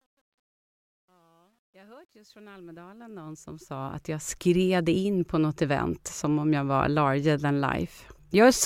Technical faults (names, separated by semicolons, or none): truncation distortion on a fade